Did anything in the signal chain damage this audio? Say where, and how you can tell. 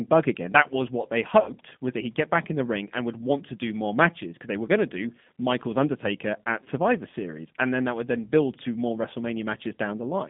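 Yes. The codec stage shaped the whole clip: the audio is confined to a band of about 150 Hz to 3.6 kHz, with the rough, synthetic texture of a G.729 codec, here sounding like the G.729A variant at a rate consistent with 8 kbit/s. The damage is plainly audible throughout. The decoder rebuilds each 10 ms frame from a vocal-tract filter, a pitch predictor and a few pulses, so fine detail is lost.

There is also VoIP packet loss concealed by the speech codec, a network-stage fault. The first gap runs from 1.40 to 1.51 s, after "was what they" and before "was that he'd get", with about 60 ms of audio missing, which fits three consecutive 20 ms packets. A shorter gap at 6.64 to 6.68 s loses 20 ms, fitting one packet. In both, the decoder extends its last pitch and filter state at falling gain, which produces a stretched buzz or coloured noise rather than silence.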